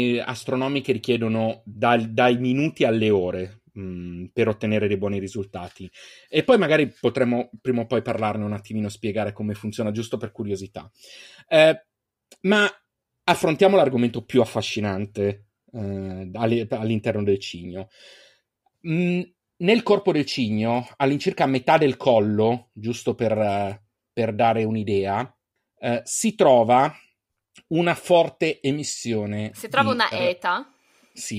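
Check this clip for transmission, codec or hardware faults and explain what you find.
Nothing stood out on a listen to this speech recording, so there's no fault to report here.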